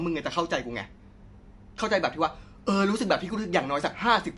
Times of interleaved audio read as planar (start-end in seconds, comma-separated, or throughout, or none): none